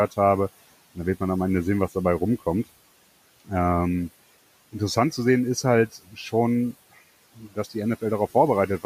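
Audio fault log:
5.92–6.33 s and 7.36–7.75 s, speech cut by the noise suppressor: the suppressor mistook quiet speech for background and pulled it down by about 13 dB for roughly 150 ms each time, leaving those parts swallowed and faint.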